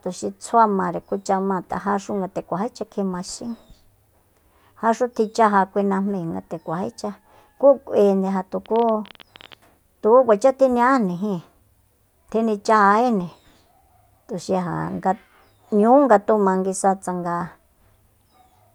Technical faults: train of clicks

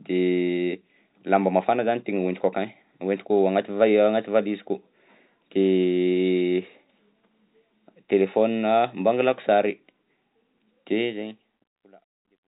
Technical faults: none

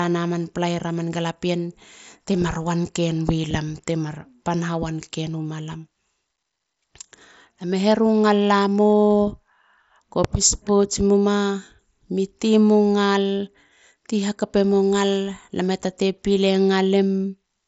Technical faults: none

